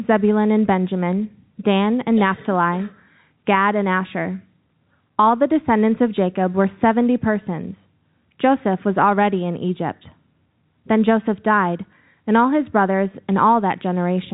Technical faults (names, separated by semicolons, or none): none